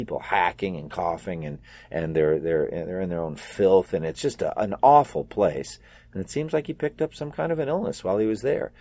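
No dropouts, clipping, distortion or timing problems are audible anywhere in the speech.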